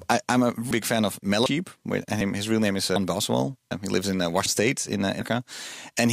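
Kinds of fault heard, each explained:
audio missing between chunks: speech jumps abruptly forward every 0.75 s, likely because about a third of a second is lost at each 1 s chunk boundary.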